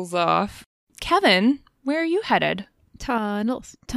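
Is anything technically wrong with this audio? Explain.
Yes. From 3.18 s to the end, the speech abruptly drops by about 6 dB, likely because one channel drops out before the mono sum.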